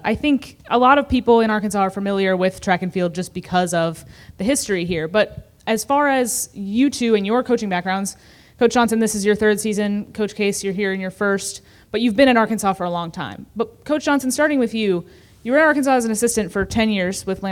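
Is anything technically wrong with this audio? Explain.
No, nothing technically wrong can be heard anywhere in the recording.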